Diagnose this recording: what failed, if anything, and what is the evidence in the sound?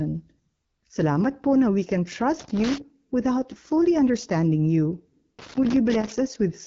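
The codec stage is the main culprit: AMR wideband (HD Voice) coding runs through the whole clip, and the speech sounds rough and raspy, with nothing above 7.2 kHz. That grain fits one of AMR-WB's lowest modes, around 8.85 kbit/s, where the pulse-based vocal tract model can't keep up.

Separately, there's loose connector crackle in the analogue wiring, with bursts from 2.40 to 2.78 s and from 5.39 to 6.12 s. A worn or dirty contact is making and breaking as it shifts, chopping the signal into irregular scratchy crackle.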